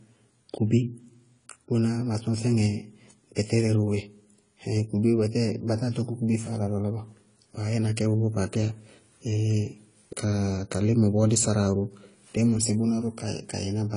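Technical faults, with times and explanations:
Throughout, AAC compression: the speech has nothing above 10.1 kHz, and what remains sounds smeared, with a watery, fizzy grain on sibilants and held vowels. That points to a low bitrate, around 24 kbps, where the encoder likely drops the top band and quantises the rest coarsely. A plain low-pass filter would dull the top as much but leave the lower band clean, without this shifting, swirling texture.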